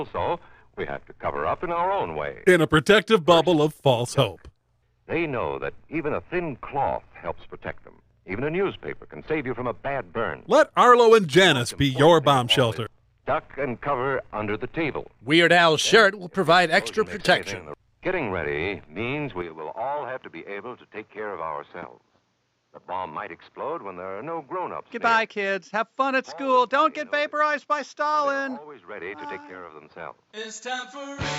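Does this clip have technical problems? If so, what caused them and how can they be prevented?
Yes. From 19.42 s to the end, the sound abruptly turns duller, with nothing above 7.6 kHz, a level drop of roughly 5 dB, and a new background noise sitting roughly 45 dB below the signal, with no silence at the change. This is likely an input switched to a poorer device. A simple filter or codec bandwidth drop would narrow the band without also shifting level, tone and noise floor together. Lock the recording input to one device and disable automatic switching.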